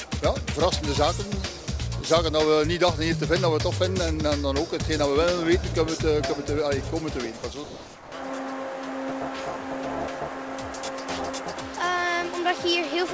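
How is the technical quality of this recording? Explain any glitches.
The recording has three brief dropouts, and in each the sound gives way to steady noise or near silence. They occur at 1.64–1.67 s, 7.37–7.43 s and 7.64–8.12 s. These are likely sound dropped by the voice detector: the sender judged the audio to be background, stopped transmitting, and the receiver filled the gap with comfort noise. Packet-loss concealment would instead smear or repeat fragments, but here the fill is steady. The sound also stops cleanly at 8 kHz, which fits a G.722 call codec.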